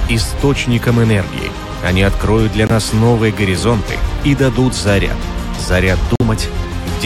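Corrupt frame muted: damaged compressed frames were rejected by the decoder and replaced with silence. At 2.67 to 2.71 s and again at 6.16 to 6.21 s, the audio drops abruptly into short holes, each fitting a few consecutive lost frames, with timing preserved.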